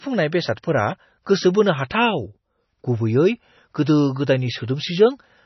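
Throughout the speech there is heavy MP3 compression damage, likely from a low bitrate around 24 kbps. Nothing reaches above about 5.9 kHz, so the treble is cut flat, and weak spectral lines flicker between frames, giving a watery, swirly texture with smeared attacks.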